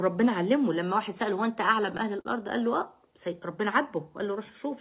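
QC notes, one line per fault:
1.66–2.27 s, repeated stalls (stutter): five short hitches in about 0.6 s, where packets showed up late and the jitter buffer kept running dry. Each time the receiver stretched the last bit of sound to cover the wait. The longest wait was 46 ms, with about 89 ms stretched in total, around 15% of that stretch. Nothing actually drops out, but it drags and jerks. The band stops at 4 kHz, which fits a G.711 A-law call path.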